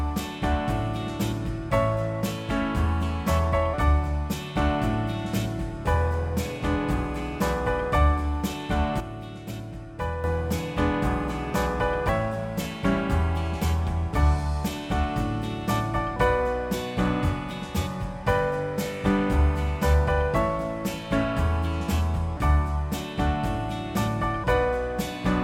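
At 9.00 s a sudden gain jump occurs, likely from a digital gain change applied between one sample and the next with no ramp. The whole signal, sound and background noise together, drops by about 8 dB at once, then returns at 10.24 s.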